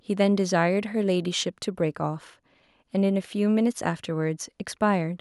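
No faults can be heard anywhere in this recording.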